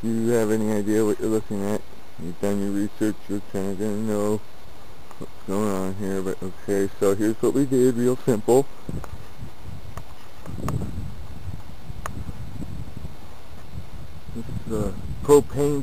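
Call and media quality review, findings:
Nothing to flag on this one: no audible problems anywhere in the clip.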